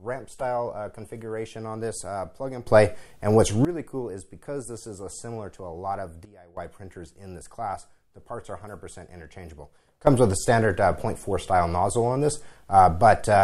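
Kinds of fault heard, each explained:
Sudden gain jump: digital gain was likely switched instantly without a ramp, so sound and background noise step together, up about 16 dB at 2.67–3.65 s, down about 16 dB at 6.25–6.57 s, then up about 13 dB from 10.07 s to the end.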